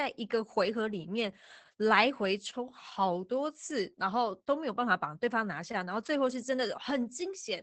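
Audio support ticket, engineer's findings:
Opus voice compression, whole clip. Speech muffled, hoarse and faintly robotic, with nothing above about 8 kHz. The sound points to wideband SILK coding at around 12 kbps. The linear-prediction coder quantises the excitation coarsely at this rate, which roughens the voiced texture.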